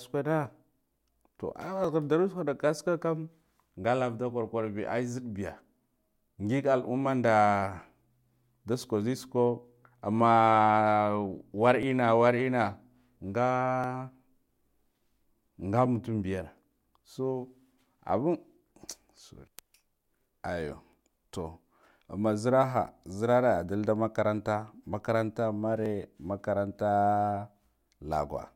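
From 1.84 s to 27.86 s there's a periodic USB or driver dropout every 2.0 s, about fifteen in all. Something blocks the audio path on a fixed cycle and roughly a millisecond of audio gets skipped, so you hear a small regular tick whenever speech is present.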